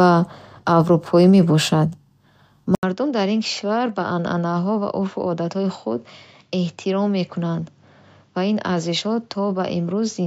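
Input switched to a poorer device at 2.75 s, likely a change of microphone or headset profile. After an 80 ms silence, the speech loses everything above 7.6 kHz and turns duller. It also drops around 10 dB in level and carries a faint new noise floor to the end.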